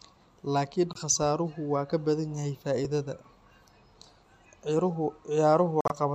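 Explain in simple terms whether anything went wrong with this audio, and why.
The speech cuts to sudden silence twice: a brief gap from 0.93 to 0.97 s and a longer one from 5.81 to 5.92 s. These are a corrupt frame muted. Damaged chunks of compressed data were rejected, so the player filled those spots with silence.

At 2.85 s the sound jumps ahead slightly. This is likely a dropped buffer (overrun), where a tiny sliver of audio was overwritten before being collected.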